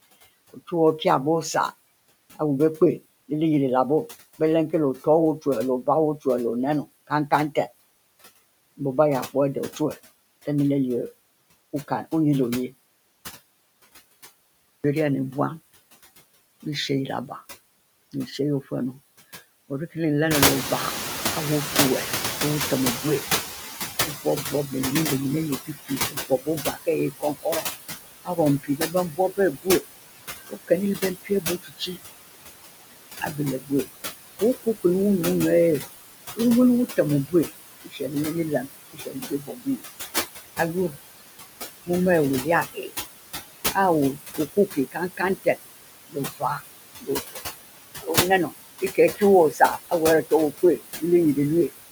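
Noise suppressor artifacts run through the whole clip. The suppressor pulls steady background down by about 18 dB, working band by band and frame by frame. The residue does not sit as an even hiss. It sinks in the gaps and swells under the talker. Room noise would stay level through pauses, so this pumping residue is what marks it as processing.

Between 4.39 and 7.56 s comes the first case of speech cut by the noise suppressor. Brief fragments totalling roughly 150 ms drop by up to about 14 dB, and soft consonants and word tails sound swallowed. Only speech fragments dip while the background stays put, which sets this apart from a level or gain drop.

Around 20.5 s the room noise itself rises by about 16 dB and then sits about 8 dB below the speech. From 20.3 to 25.55 s the noise suppressor is catching up. The new noise first comes through with less reduction, then fades over about 5.25 s as the estimate adapts, ending about 14 dB lower. 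A noise floor that slides down steadily points to this lag, where a fresh noise source would simply stay loud.

Speech cuts return at 24.01 to 24.72 s (about 12 dB) and 25.65 to 31.97 s, where roughly 2 s in total falls by up to about 21 dB. They recur at 33.21 to 34.85 s (about 19 dB) and from 35.8 s to the end, where roughly 3 s in total is lost at up to about 22 dB. Soft words and phrases sound swallowed or faint, so these are not dropouts.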